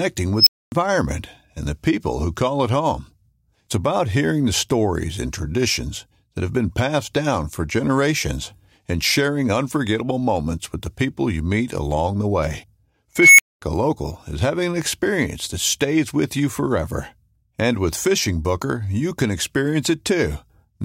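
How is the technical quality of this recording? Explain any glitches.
The speech is interrupted twice by an unstable filter. From 0.38 to 0.72 s a tone of around 5 kHz swells in about 87 ms, clips, then drops into roughly 255 ms of silence. From 13.17 to 13.62 s a tone near 2 kHz builds over about 214 ms and is followed by roughly 232 ms of silence. Bad coefficients in a recursive filter let its output grow unchecked until the numbers overflow and the sound cuts out until the filter resets. Unlike acoustic feedback howl, each squeal ends in abrupt silence rather than fading.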